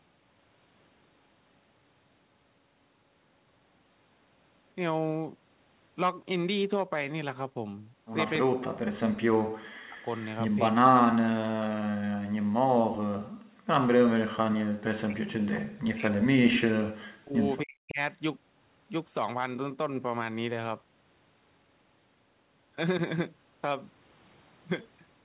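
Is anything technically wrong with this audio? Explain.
Yes, there are a few echo-canceller problems in here, all in the middle stretch of the clip.

Speech suppressed in double talk shows up three times: 8.43 to 10.08 s, 10.7 to 11.75 s, and the longest, 14.38 to 17.99 s. In each the speech sinks by as much as about 40 dB. The likely cause is the far side talking at the same moment, so the canceller couldn't tell the local voice from loudspeaker echo and turned everything down. That last one eats roughly three seconds.

There's a brief echo leak between 10.16 and 10.25 s, a faint scrap of the voice coming back about 276 ms late and sitting about 25 dB under the speech. Most likely the far end is on a loudspeaker and its canceller didn't fully scrub what the mic picked up, so a short delayed copy slipped back down the line.

Background gated by the echo canceller hits twice: 12.4 to 12.65 s, dropping about 40 dB, and 13.33 to 13.67 s, dropping about 38 dB. 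The room tone just vanishes for a fraction of a second each time, then returns. That's the canceller clamping the mic hard while the loudspeaker was playing, then releasing it.

For context, the top end stops at 4 kHz, which fits a narrowband call codec like G.711 and isn't a fault.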